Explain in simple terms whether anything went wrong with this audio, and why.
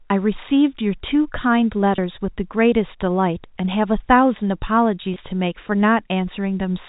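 Two brief hiccups in the speech, both the same kind of fault: packet loss with pitch repetition. Around 1.96 to 1.98 s, and again around 5.14 to 5.16 s, about 20 ms of audio went missing, which fits a single lost packet each time. To cover the gap, the receiver replayed the last little cycle of the voice, so you hear a tiny held, slightly buzzy blip rather than a hard dropout. The narrow phone-line sound of G.711 telephone coding is just the format itself.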